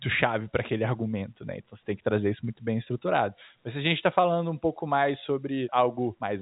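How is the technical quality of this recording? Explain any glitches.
No glitches can be heard in the speech, which carries the narrow, band-limited character of G.711 telephone coding, with nothing above 3.8 kHz.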